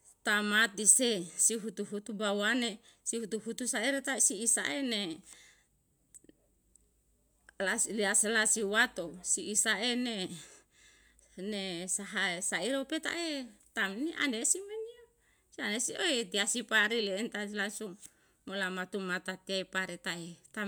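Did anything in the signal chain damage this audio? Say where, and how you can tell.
No, nothing in the signal chain has audibly damaged this speech recording, and every stage from capture to playback leaves the signal intact.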